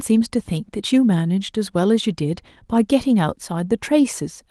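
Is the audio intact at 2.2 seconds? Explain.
Yes, the audio is intact at 2.2 seconds, with no fault at that moment.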